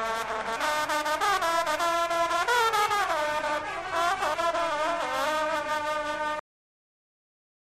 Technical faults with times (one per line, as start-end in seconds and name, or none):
6.39-7.76 cut-off end